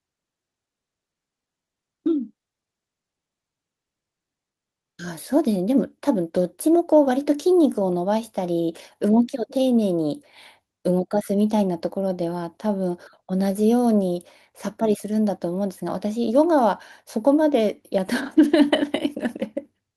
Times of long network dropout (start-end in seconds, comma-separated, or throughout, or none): none